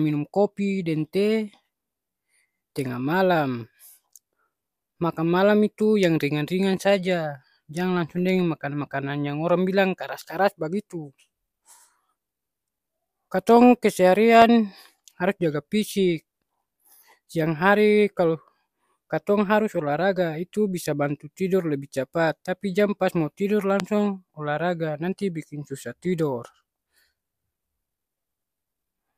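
At 14.42 s a single loud pop cuts through the speech. It is a short, sharp burst, far louder than the talking around it. The speech carries on underneath without a break. A second loud pop follows at 23.8 s, just as brief and just as loud. Each is a single click, not a pair. The likely cause is a sudden voltage spike entering the signal path, such as a switch, a connector or static discharge.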